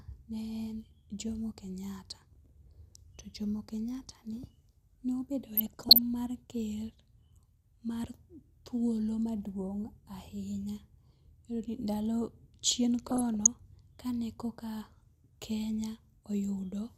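At 5.53 to 5.98 s and again at 13.07 to 13.47 s the speech gets DAB burbling: weak reception lets bit errors, under one percent, through into the MP2 data, so sub-bands jump about frame by frame and you get squelchy, bubbling chirps.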